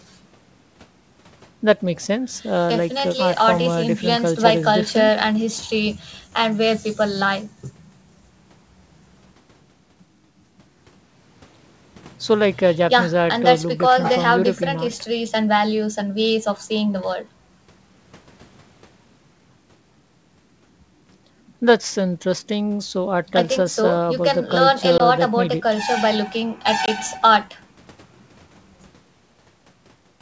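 Packet loss on an ADPCM call hits this speech clip at 24.98–25.01 s and 26.86–26.89 s: each time about 20 ms, likely a single packet, drops to hard-edged silence. The decoder's predictor and step size then lose track of the sender's, so the speech resumes slightly distorted before recovering. The G.722 wideband path is clear up to about 7 kHz with only faint coding hiss, which fits 64 kbit/s.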